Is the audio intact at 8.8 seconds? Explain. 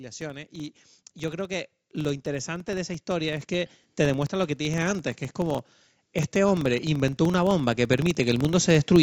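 No. At 8.8 seconds a low, steady buzz of small ticks sits under the speech, rising and falling with its level. This is a filter restarted on every block: each block starts from silence and opens with a tiny transient, repeating at about 23.4 Hz, which fits a 2048-sample block. The whole sound is also swelling at that point, speech and background together, as automatic gain rising lifts the level by about 7 dB between 6.32 and 8.95 seconds, after the gain control judged the input too quiet.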